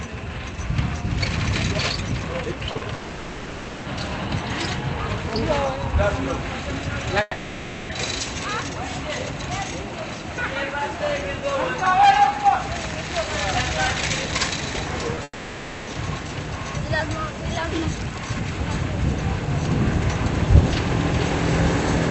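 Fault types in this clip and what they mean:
Short concealed packet loss: Brief gaps of 20 to 40 ms, near 2.71, 2.77 and 15.15 s. The receiver continued the previous sound, leaving a short smear or wobble.
Long network dropout: Three stretches of 0.64 to 0.9 s become a fading buzz or hiss. This is likely lost network audio, and the sound resumes with that part missing.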